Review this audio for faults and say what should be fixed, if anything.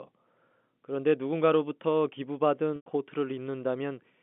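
There's a packet loss with pitch repetition from 2.76 to 2.86 s. About 100 ms went missing, which fits five 20 ms packets. The receiver looped the last pitch period, so you get a brief buzzy hold that fades to silence before the sound cross-fades back in over the G.711 telephone-band line. A bigger jitter buffer or forward error correction on that link should keep those packets from dropping out.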